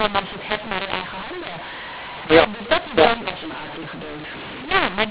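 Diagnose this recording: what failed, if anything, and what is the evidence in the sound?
Codec stage: a mu-law and A-law mix-up, with mu-law-coded speech decoded as A-law for the whole clip. Levels come out scrambled, so speech sounds harsh and distorted, and pauses fill with noise because the quietest samples are lifted well above silence. The band stops near 4 kHz, consistent with 8 kHz telephone coding.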